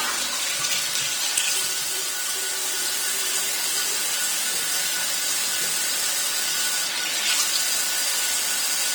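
From start to finish the audio carries plainly audible Opus compression damage, likely from the Opus codec in its CELT music mode at a low bitrate, around 16 kbps. The audio still keeps its full bandwidth, but the band energies are kept while the fine detail inside them is replaced by folded or noise-filled content. Tonal parts come out rough, grainy and noisy rather than swirly or hollow.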